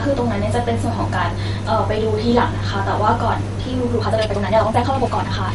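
Speech runs through the whole clip with plainly audible MP3 compression damage: a watery, swirling quality, smeared consonant onsets, and nothing above 11.2 kHz. On a spectrogram the treble stops at a flat ceiling, and weak high bands flicker on and off, which fits a low bitrate around 48 kbps. From 3.93 s to the end, a time-stretched section plays at 1.84 times the pace with unchanged pitch, sounding rushed. The waveform shows syllables packed tightly together, likely from software shortening that stretch by dropping short pieces.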